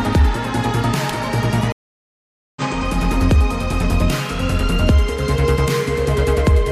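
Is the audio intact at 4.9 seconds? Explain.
Yes, at 4.9 seconds the audio is intact, with no dropout, click, distortion or other fault at that point.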